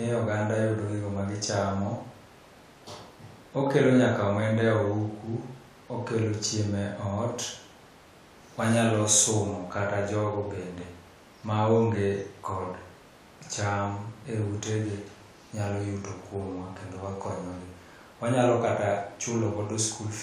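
A speech recording with nothing technically wrong in it.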